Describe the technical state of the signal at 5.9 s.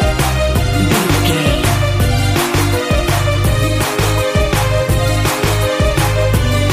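At 5.9 s the signal is intact, with no technical fault present at that moment.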